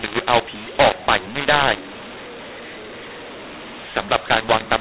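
From start to finish, the speech carries a mu-law and A-law mix-up. The telephone audio was coded with mu-law but decoded as A-law. Sample levels come out scrambled, some too loud, others too soft. The voice sounds harsh and distorted, and pauses fill with noise. The 4 kHz telephone bandwidth itself is intact.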